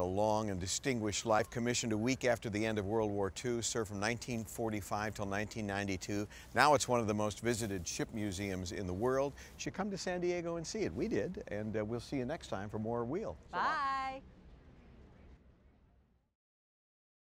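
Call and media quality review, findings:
Pre-emphasis left on, 0.00 to 9.66 s. Harsh, thin, sibilant top end. Probable component: FM-style 75 µs pre-emphasis without matching de-emphasis, so treble stays lifted about 14 dB at 10 kHz versus 1 kHz. Spectrogram: upper bands abnormally bright until 9.66 s.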